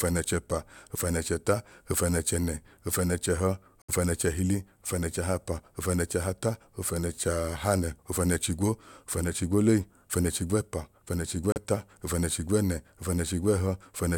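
A Bluetooth stall, likely from radio interference holding up packets until the headphones' buffer ran empty, interrupts this speech twice. From 3.82 to 3.90 s playback drops to about 67 ms of dead silence before the sound returns. A second, shorter stall follows from 11.52 to 11.58 s, with a gap of about 37 ms. Each one is a clean dropout to nothing.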